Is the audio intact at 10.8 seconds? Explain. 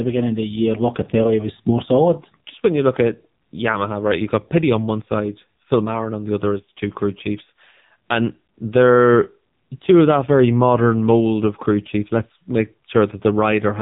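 No. At 10.8 s, as throughout the clip, the speech has been through the AMR narrowband mobile codec at a low rate, which fits a 6.7 kbps mode. The codec rebuilds the voice from a simple vocal-tract model excited by a few pulses per 5 ms, and discards everything above about 3.8 kHz. At this moment the voice therefore sounds muffled, heavily buzzy and synthetic, with clearly damaged detail.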